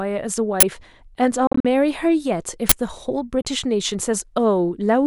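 At 0.60 to 0.63 s a harsh, loud burst of digital noise lasts about 23 ms and then vanishes. This is an uninitialised buffer. A block of about 1024 samples was sent to the output before any audio was written into it, so whatever data was left in that memory played back as raw samples. The same burst returns at 2.69 to 2.72 s, again about 23 ms long, which points to the same block size.

From 1.47 to 1.65 s the speech breaks up into several short holes. About 116 ms of sound is missing across that 174 ms stretch, and the longest gap is about 44 ms. Each time the speech comes back it has moved on, as if it had kept playing through the silence. A Bluetooth dropout is the likely cause: several audio packets reached the headphones too late and were discarded. A second, shorter hole of about 29 ms at 3.42 to 3.45 s likely comes from the same Bluetooth dropout, this time with only a couple of packets lost.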